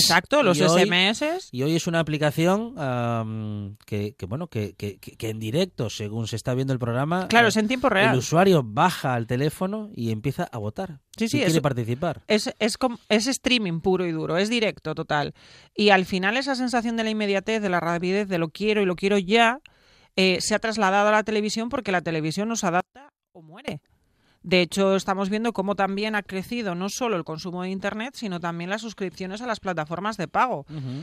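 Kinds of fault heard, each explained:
One channel inverted: just after "porque la televisión nos", from 22.80 to 23.68 s, the speech suddenly drops by about 24 dB and goes faint. That's likely one stereo side flipped in polarity, so the centred voice cancels in mono.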